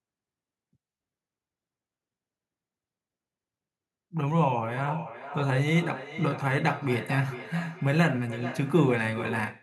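From 4.56 s to the end at 9.62 s, a second device on the same call is playing this speech aloud in the room, and the first device's microphone picks that playback up and sends it back. Its echo canceller only removes its own output, so the loop goes uncorrected. The result is feedback echo between two devices: the speech returns roughly every 400 ms, thinner and more ringing, peaking about 13 dB below the direct speech.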